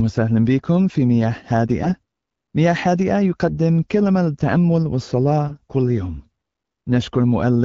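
Speech coded with AMR-WB (HD Voice), whose clean band-limited sound fits a mid rate of about 12.65 kbit/s, is hit by AMR bit errors at 1.78–1.96 s, 3.47–3.58 s and 5.48–5.56 s. Flipped low-priority bits misplace excitation pulses and skew gain and spectral values. The voice turns briefly hoarse and gargly while keeping its pitch and level. On a spectrogram these bursts show smeared, noisy harmonics, and the waveform stays at normal amplitude.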